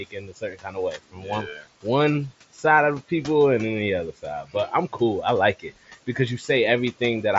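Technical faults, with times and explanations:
Throughout, noise suppressor artifacts: the background sinks by about 16 dB between phrases and swells under them, as the suppressor lowers the bands it takes for noise frame by frame.
0.00–0.77, 0.97–1.30, 1.46–1.67, 4.43–4.72 and 5.59–5.91 s, speech cut by the noise suppressor: short stretches of speech sound swallowed, dropping by about 15 to 18 dB, because the suppressor mistook them for noise.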